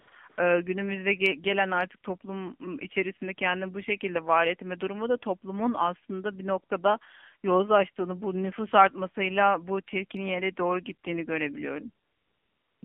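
Throughout, the speech has passed through an AMR narrowband mobile codec. The signal was squeezed into a telephone band of roughly 150 Hz to 3.4 kHz and rebuilt from a vocal-tract model fed by sparse pulses, at a low rate that fits the 7.4 kbps mode. The damage is plainly audible. Nothing above 3.4 kHz survives, and the voice comes across buzzy, thin and somewhat synthetic.

AMR comfort noise appears four times. Each time, the sender judged the talker silent and stopped sending speech frames, and the receiver filled the gap with generated noise. This happens from 0 to 0.08 s, briefly from 0.10 to 0.12 s, from 0.30 to 0.38 s, and for about three quarters of a second from 12.06 to 12.82 s. In these stretches the real background gives way to a smooth, steady hiss that switches in and out.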